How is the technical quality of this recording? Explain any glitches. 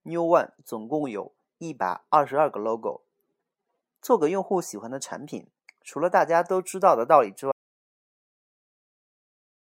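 The recording has one clear fault: an audio dropout to silence at 7.52 s that lasts to the end, about 2.3 s. The speech cuts off mid-flow into silence, with no room tone or noise floor at all. The input was likely lost, through a disconnected device, a failed link or a mute, while the recorder kept writing silence. On a waveform this shows as a flat line, and on a spectrogram as a blank band.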